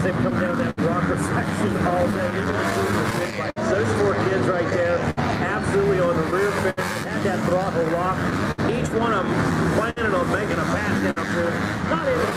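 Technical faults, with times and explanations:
Throughout, clock drift between sender and receiver: the sender's clock runs about 5% slow, so the draining buffer forces repeated slivers and uneven little hiccups.
0.11–12.33 s, scattered short gaps: about twenty missing packets, the longest near 70 ms, each filled by continuing the last sound, giving brief smears and ticks.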